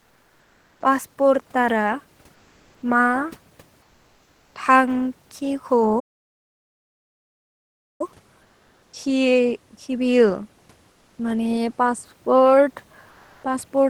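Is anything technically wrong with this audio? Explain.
Yes. In the pauses at 0.00–0.82 s, 2.34–2.82 s, 3.82–4.55 s, 8.42–8.93 s, 10.92–11.18 s and 13.10–13.43 s there is comfort noise in place of the background. The sender likely stopped transmitting during silence, a discontinuous-transmission scheme such as the one Opus uses, and the receiver filled each gap with synthetic noise. The room's real hiss, about 37 dB below the speech, becomes a flat, featureless wash, typically about 2 to 3 dB quieter.

From 5.99 to 8.01 s there is a playback stall. The player was likely starved of data or blocked for about 2 s, so the output drops to complete silence mid-flow before the sound resumes.

At 8.91 s the onset is clipped by the voice detector. The detector likely reacted late to the returning speech, so roughly the first 20 ms went unsent and comfort noise covered them. The sound therefore starts abruptly, without its soft beginning.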